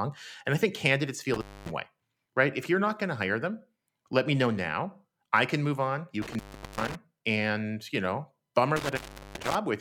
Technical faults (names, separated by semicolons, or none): intermittent contact